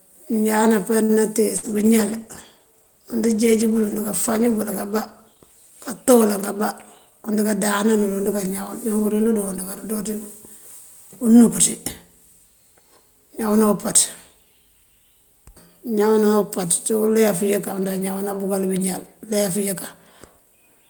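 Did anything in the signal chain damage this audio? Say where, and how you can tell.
Yes. At 1.03 to 1.12 s there's a short stall from a late packet: the jitter buffer ran dry, so the receiver held the last sound about 55 ms without losing anything.

Around 1.57 to 1.77 s there's a burst of packet loss. The concealment continues the last sound and fades it for about 58 ms, then the speech picks up roughly 60 ms further on.

From 1.67 to 6.32 s a call bitrate drop takes Opus from 32 to 15 kbps, bottoming out for about 3.8 s. That's why it sounds rough and muffled there.

At 6.98 to 7.45 s the jitter buffer speed-up trims pitch periods, about 70 ms in total. Speech runs at 113% speed with unchanged pitch, which sounds hurried.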